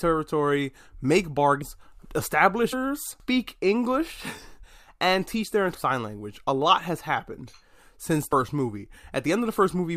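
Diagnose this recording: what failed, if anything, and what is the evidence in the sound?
Compressed frames skipped at 1.60, 2.72, 4.62 (just before "and teach their") and 8.32 s, a codec-stage fault. Speech jumps ahead by roughly 0.2, 0.5, 0.1 and 0.15 s, in whole 23.2 ms frames. Overlapping frames smear each join into a blip rather than a click.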